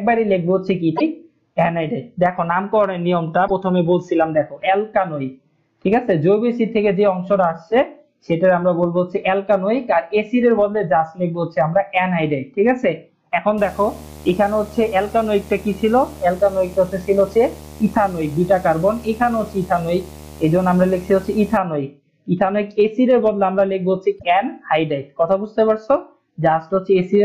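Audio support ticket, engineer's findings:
Damaged data in a compressed stream, 0.93–1.01 s. Short glitch, about 80 ms. Decoder rejecting a bad frame, losing sync, resuming at next header.
Same fault, 3.44–3.50 s. Brief glitch, about 70 ms. Same resync behaviour.
Same fault, 24.15–24.24 s. Blip, about 80 ms. Probable component: file or stream transport, not playback hardware. Corrupted bytes upstream of decoder.

Video or display buzz, 13.58–21.58 s. Steady 75 Hz buzz with hash on top, 8 s long. Level around 20 dB under the programme. Probable component: monitor or video cable near the audio path. Rate matches a 75 Hz display refresh. Field-rate interference coupling into the analogue audio path. Check cable routing, grounding between display and audio interface.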